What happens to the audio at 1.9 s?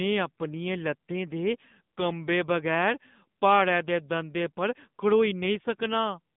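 At 1.9 s you're hearing the AMR narrowband mobile codec, which runs through the whole clip rather than appearing at that moment. The speech is squeezed into a band of roughly 150 Hz to 3.6 kHz, and the codec rebuilds it from a vocal-tract model excited by a handful of pulses per short sub-frame. At this bitrate that gives a plainly buzzy, synthetic edge, consistent with one of the lower modes, around 7.4 kbps.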